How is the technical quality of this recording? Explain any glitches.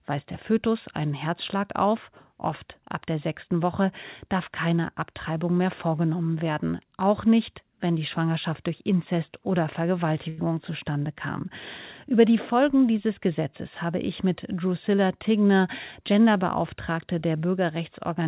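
The recording has one audible glitch, a short stall from a late packet, in speech that comes through the call path with nothing above 4 kHz, which fits a narrowband telephone codec such as G.711.

From 10.29 to 10.46 s, just before "zustande kam", a packet arrived late and the jitter buffer ran dry. The receiver filled the gap by stretching the last sound for about 88 ms, then resumed where it left off. No speech is lost, but a sound hangs on too long with a faint buzzy or dipping quality, and everything after it runs 88 ms later.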